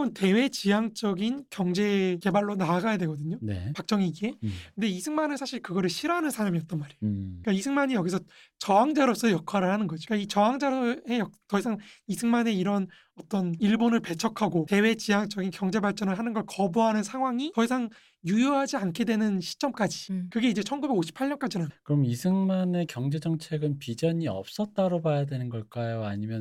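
No technical faults can be heard anywhere here.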